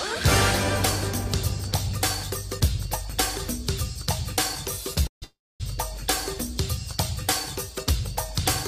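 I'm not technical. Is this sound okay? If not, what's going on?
No. A call audio freeze, likely from data arriving late over the connection, hits twice in a row, 5.07 to 5.24 s and 5.24 to 5.62 s. Each time the last sound stretches into a fading buzz or hiss, then silence, and the sound picks up where it stopped, 0.15 s late after the first and about half a second late after the second.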